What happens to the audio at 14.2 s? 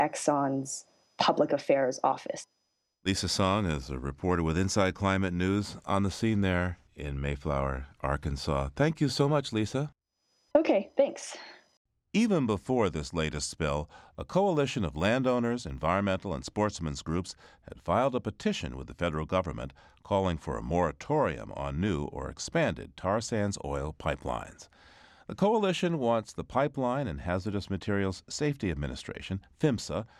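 At 14.2 s the speech carries a steady 20 Hz buzz, part of a span from 13.7 s to 16.0 s caused by a resampler restarted on every block. Each 50 ms block was converted on its own, apparently from 48 kHz to 44.1 kHz, so every block edge was computed against missing neighbours and picks up a small error. Unlike dropout clicks, these ticks are perfectly regular and fade whenever the speech itself pauses.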